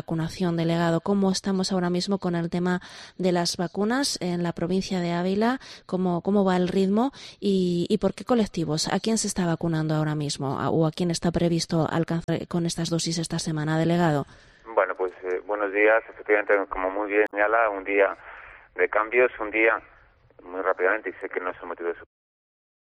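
At 12.24 to 12.29 s and again at 17.24 to 17.34 s, damaged data in the compressed stream produces short glitches, about 50 ms and 100 ms long. Corrupted bytes at those points leave the decoder misreading frames and losing sync. It then skips forward to the next valid frame header, so each glitch is a brief break in the audio. The smooth fade-out ending at 22.07 s is not a fault.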